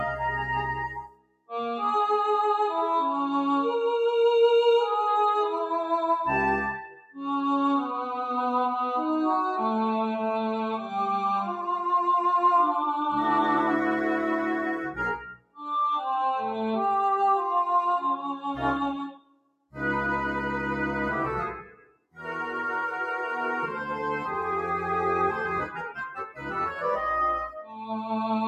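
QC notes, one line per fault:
Throughout, noise suppressor applied to music or sounds: a speech-oriented suppressor treats steady tones, ambience and reverb as noise, so gain keeps shifting by around 5 dB. Attacks pass while sustained parts and tails sag, giving an audible pumping, thinned texture.
0.89–1.51, 6.87–7.16, 15.32–15.68, 18.17–18.46, 18.95–19.76, 21.63–22.2, 26.27–26.47 and 27.63–27.86 s, sound cut by the noise suppressor: here the suppressor misreads held or decaying sound as noise and pulls it down by about 10 to 21 dB, deepest at 0.89, 15.32, 18.95 and 21.63 s, so the sound sinks or its decay is cut short.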